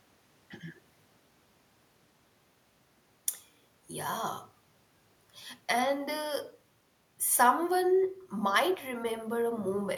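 No technical faults can be heard anywhere in the speech.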